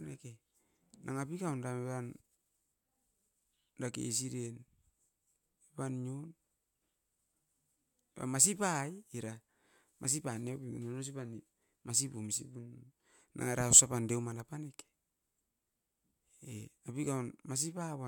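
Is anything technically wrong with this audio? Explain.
No, no technical faults here.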